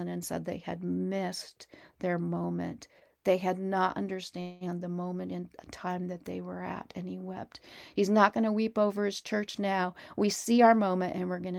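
At 4.41 s the speech stalls for about 0.2 s, with the last sound stretched into a fading buzz or hiss until 4.64 s, then it resumes right where it left off. That's a call audio freeze, likely packets held up in transit draining the jitter buffer, so nothing's lost, just 0.2 s of added delay.

From 9.82 s to 11.54 s there's a jitter buffer speed-up. The receiver trims tiny pitch-period slices over and over to shed built-up delay, around 0.15 s in total. The speech runs at about 108% speed with unchanged pitch and comes across hurried.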